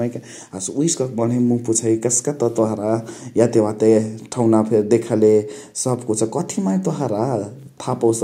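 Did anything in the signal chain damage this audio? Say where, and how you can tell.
Yes. The damage is in call processing, where automatic gain rising lifts the level from 0.52 s to 2.98 s by about 6 dB. The gain control judged the input too quiet and raised its gain step by step over roughly two and a half seconds. What separates this from a talker moving closer to the microphone is that the background noise swells by the same amount, because the whole signal is being amplified.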